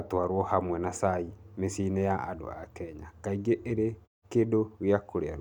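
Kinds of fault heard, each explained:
No faults are heard.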